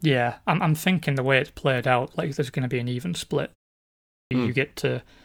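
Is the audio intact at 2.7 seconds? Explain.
Yes, the audio is intact at 2.7 seconds, with no fault present at that moment.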